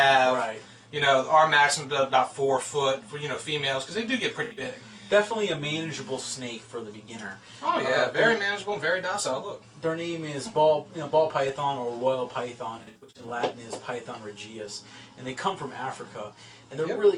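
At 4.44 to 4.66 s and again at 12.78 to 13.31 s, AAC frame loss with concealment smears the sound. The decoder patches scattered gaps, runs of up to about 70 ms, from its last good spectrum, leaving blurred, noisy bands on a spectrogram and softened waveform envelopes.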